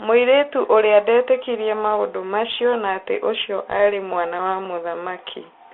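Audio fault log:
Throughout: Bluetooth CVSD headset codec. The speech is confined to about 300 Hz to 3.5 kHz, consistent with a 64 kbps CVSD link. Each sample is only an up-or-down step of adaptive size, so granular hiss and slope-limited roughness sit on the speech. The spectrogram shows a hard ceiling near 3.5 kHz, and the waveform looks staircase-ragged.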